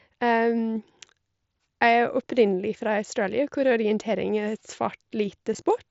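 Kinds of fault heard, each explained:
Concealed Bluetooth headset packet loss: Audio packets between headset and phone went missing near the end, from 5.54 to 5.62 s. About 30 ms of sound was lost, scattered over 75 ms. The gaps were short, the longest just 7.5 ms. That pattern fits four lost packets. The receiver filled each gap by repeating a closely matching stretch of recent waveform. The result is nearly hidden rather than silence, heard over the wideband mSBC headset sound.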